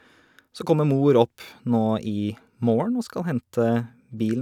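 No technical faults can be heard anywhere in the recording; the speech signal stays continuous and intact throughout.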